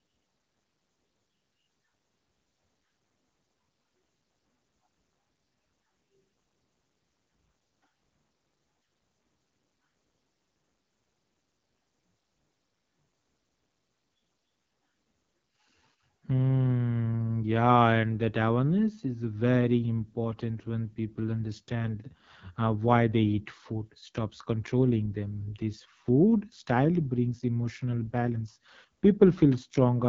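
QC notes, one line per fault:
throughout, AMR wideband (HD Voice) codec: the speech runs through a low-rate AMR-WB encoder, which fits 8.85 kbit/s, one of its two lowest modes. The pulse-driven model then leaves the speech plainly rough and raspy, with only shaped noise above 6.4 kHz and nothing above 7.5 kHz.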